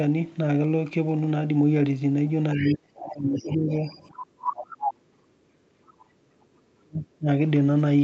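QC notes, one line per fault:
2.56–3.85 s, 4.1–5.82 s, 6.06–7.28 s: speech suppressed in double talk. The speech dips by up to about 40 dB or breaks into pieces, likely because the echo canceller turned down both talkers during overlap.
2.65–2.74 s, 3.36–4.06 s, 4.47–4.51 s, 4.75–4.93 s: other side's voice leaking through. A second voice comes through in scraps, at first about 15 dB below the speech and later only about 5 dB below. This is likely loudspeaker echo that the canceller did not remove.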